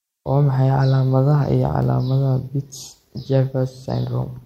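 No technical faults are audible in the recording.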